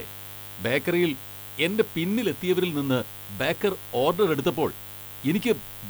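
Speech recording with two problems running the whole way through. There's a raspy mains buzz built on 50 Hz, sitting roughly 20 dB under the speech, with spiky harmonics climbing into the kilohertz range, the kind of interference a dimmer or poor shielding lets in. On top of that you get a thin, bright hiss leaning hard into the top end, only around 15 dB below the speech. That's low bit depth with noise shaping, consistent with something like 7-bit audio whose rounding error has been pushed up toward the highest frequencies.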